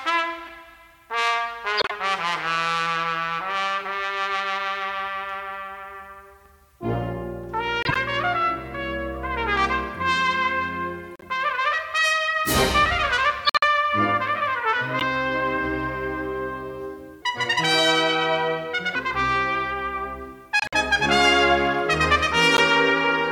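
Corrupt frames decoded start at 0.46, 1.77, 7.83, 11.16, 13.43 and 15.0 s, each a short chirp or noise burst lasting from a single frame to several, as damaged gain and spectral codes put energy at the wrong frequencies.

From 17.22 to 18.95 s, a section plays at the wrong speed: the sound runs 1.38 times fast and rises about 5 semitones, high and hurried, most likely from being played against the wrong clock rate.

Two more corrupt frames are decoded at 20.60 s (a burst of several frames) and 22.57 s (a single frame), heard as brief blips.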